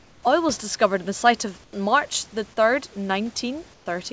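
Comfort noise in place of the background at 0.00–0.23 s, 1.64–1.73 s and 3.74–3.86 s: the room's background, about 31 dB under the speech, drops to a flat, featureless hiss about 5 to 7 dB quieter, likely discontinuous transmission with synthetic fill during pauses.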